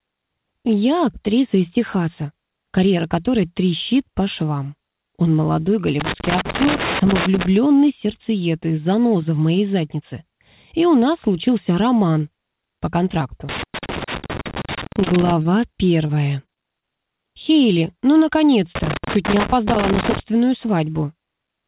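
An irregular scratching burst from 6.00 to 7.46 s is loose connector crackle: a worn or dirty contact makes and breaks as it shifts, chopping the signal, and any DC on the line adds pops. It returns from 13.49 to 15.32 s and again from 18.75 to 20.20 s.

Inside that second burst, a brief smear at 14.06 to 14.09 s is a short concealed packet loss. About 20 ms of audio never arrived in time, so the receiver extended the preceding sound and blended back, and a short transient can disappear. The same smear recurs at 15.04 to 15.17 s and 15.43 to 15.47 s, each hiding about 20 ms.

Between those, from 14.19 to 14.24 s, a sound is held slightly too long with a faint buzz or dip. This is a short stall from a late packet: the jitter buffer emptied and the last sound was stretched by 29 ms until the packet arrived. Nothing is lost, but playback slips 29 ms later.

From 16.07 to 16.84 s the sound turns choppy. 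This is repeated packet loss (robotic sound): five gaps in quick succession, the longest 22 ms, about 80 ms missing in all, are each patched by continuing the previous sound, and about 12% of that stretch is concealed.

Throughout, nothing is heard above 4 kHz, which fits the 64 kbps G.711 mu-law call path.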